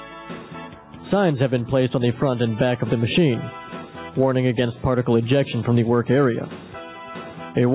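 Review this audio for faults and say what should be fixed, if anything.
Gain pumping runs through the whole clip, with a gain swing of around 10 dB. The likely cause is input gain set far too high for the microphone, with a fast limiter or compressor clamping down on each peak and releasing in the pauses, which flattens loud and soft passages into a squashed level. The band stops at 4 kHz, consistent with a G.711 mu-law call path at 64 kbps. To prevent the pumping, lower the input gain so peaks sit below the limiter's threshold.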